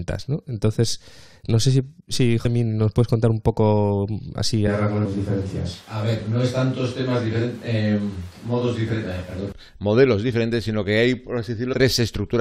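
Speech recording with two kinds of fault. Compressed frames are skipped three times: at 2.44 s, between "no sé si si" and "nos puedes contar un", roughly 150 ms of audio goes missing; at 5.04 s roughly 300 ms; and from 11.72 to 11.74 s roughly 100 ms. The jumps fit whole multiples of a roughly 21 ms frame, so the decoder dropped missing or damaged frames. From 4.67 s to 9.52 s the sound turns abruptly roomy and hollow, with thinner bass and room noise at about 25 dB below the speech. The level barely changes. It snaps back just before "modelos diferentes sino". This is likely a switch to a distant microphone, with the close microphone's signal lost for that stretch and a farther pickup covering it.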